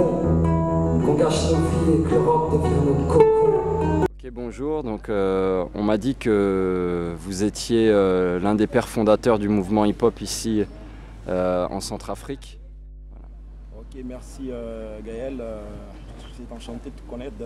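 Mains hum runs from the very start to the end of the recording. Power-line current has leaked into the signal path, most likely through a ground loop or a transformer sitting close to the wiring, so the 50 Hz supply frequency rides underneath everything. It comes through as a constant low drone with some low harmonics above it, sitting only about 20 dB below the wanted audio.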